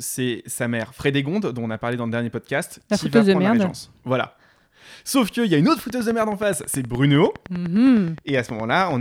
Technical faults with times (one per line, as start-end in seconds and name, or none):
5.79-8.92 train of clicks